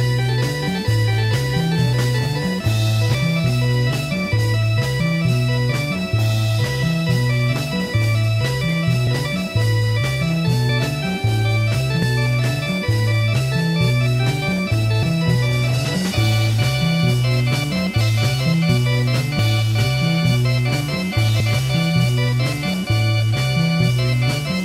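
Compressed frames skipped at 3.14, 9.07, 10.69, 12.02, 15.02, 18.00, 19.39 and 21.40 s: at each point whole compressed frames of about 26.1 ms never reach the output, either missing from the file or rejected by the decoder as damaged. The sound jumps forward, losing roughly 100 ms at 3.14 and 21.40 s, about 150 ms at 10.69 s, about 200 ms at 9.07, 12.02 and 18.00 s, and about 300 ms at 15.02 and 19.39 s. Each jump leaves an audible join.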